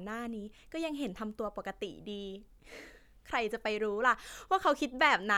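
Speech recording, with no technical fault to report anywhere in it. There is nothing here that needs a time or a cause.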